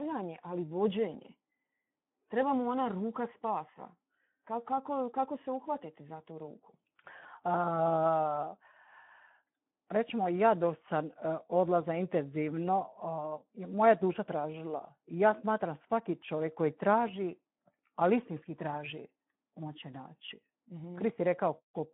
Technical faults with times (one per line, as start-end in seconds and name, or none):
0.00-21.94 Speex codec